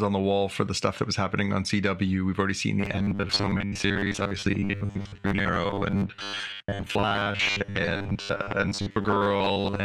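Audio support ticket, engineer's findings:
Robotic sound from repeated short buffers, 2.80 s to end, right after "already seen". Rigid metallic buzz at 100 Hz, roughly following speech. Likely audio underrun: playback loops last ~10 ms block, most real audio skipped.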